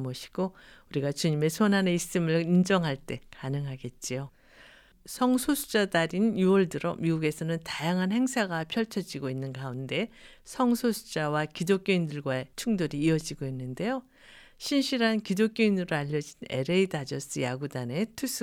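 Nothing technical goes wrong anywhere in this speech recording, so there's no fault to point to at any moment.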